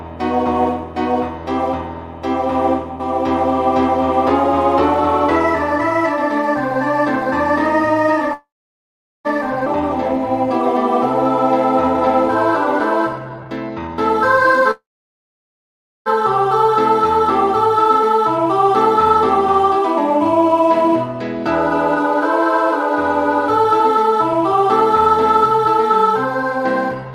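A call audio freeze interrupts the audio from 8.33 to 9.27 s and again from 14.71 to 16.08 s. The sound stops advancing, briefly carries on as a fading continuation, and then goes quiet for about 0.79 s the first time and about 1.24 s the second. It then picks up from exactly where it halted, so nothing is lost and the whole timeline slides later by 0.91 s and 1.35 s. The likely cause is held-up packets draining the jitter buffer. A skip ahead follows at 9.65 to 9.68 s, where roughly half a second of audio vanishes and the two sides are stitched together with only a 10 ms fill. That cut wins back much of the delay the first freeze added, as when audio that was already queued behind the gap gets discarded. Jitter buffer speed-up appears from 13.42 to 14.62 s, where playback runs at 116% speed at unchanged pitch and sounds noticeably rushed as about 0.2 s is trimmed away. It appears again from 17.67 to 27.13 s at a gentler 103%, a sustained speed-up that removes about 0.3 s. 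In both stretches the receiver is repeatedly cutting tiny pitch-period-sized slices to shrink a buffer that has grown too deep.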